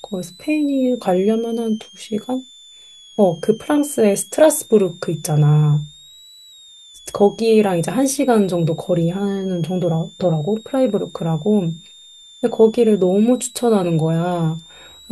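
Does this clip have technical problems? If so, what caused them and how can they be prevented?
Yes: a thin, high whistle around 3.1 to 4 kHz, sitting well below the speech, runs throughout. It is switching supply whistle from a power supply slipping into audible burst mode. Powering the recorder from a battery or a linear supply, or moving it away from the charger, prevents it.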